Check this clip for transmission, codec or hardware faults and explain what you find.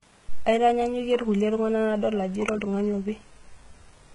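Low-bitrate audio saved at a high bitrate runs through the whole clip. Nothing in the speech reaches above 11 kHz, and the bandlimited texture of a heavily compressed first encoding remains, which fits a very low-bitrate source, likely something around 12 kbit/s HE-AAC, later re-encoded as a generous MP3. The second pass cannot restore what the first discarded, so the dull top end and the artefacts stay as they were.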